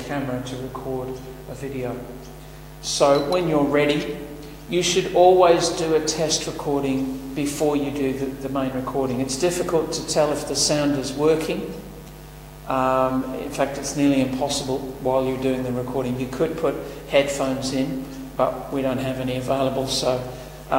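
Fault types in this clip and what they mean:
Nothing stood out as a problem when listening to this audio.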